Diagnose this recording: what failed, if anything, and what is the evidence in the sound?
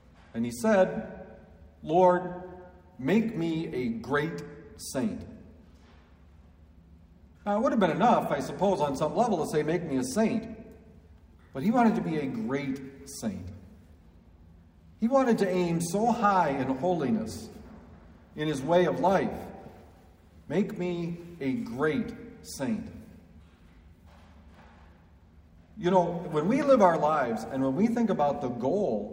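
Nothing in the recording points to a failure at any stage, so there's no fault here to diagnose.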